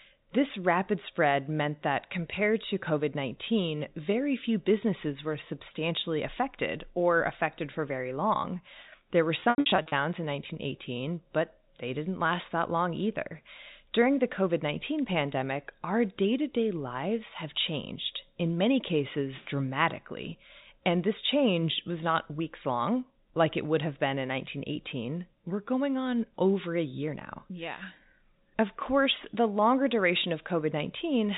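Packet loss with pitch repetition, 9.4 to 9.92 s: 300 ms of speech goes missing in scattered gaps, the longest 80 ms. The receiver repeats the last pitch period, so short gaps sound held and buzzy, and the longest fades toward silence before speech cross-fades back.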